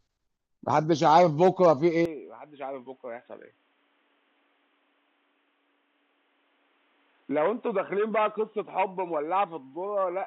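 From 2.05 s to the end, the speech drops about 10 dB and turns dull, nothing above 3.8 kHz, with a faint new hiss: likely an input switched to a poorer device.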